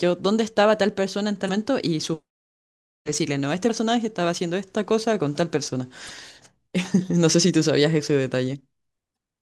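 At 1.45–1.49 s, 3.66–3.70 s, 6.07–6.10 s and 9.13–9.16 s the speech breaks into short chirps or blips: damaged data in a compressed stream. Corrupted bytes make the decoder misread frames and lose sync until it locks onto a valid frame header again.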